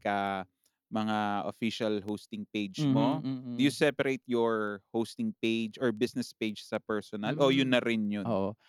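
From 0.27 to 8.57 s, word clock ticks recur about every 0.3 s as an unlocked clock, roughly 100 ppm off, slips one sample.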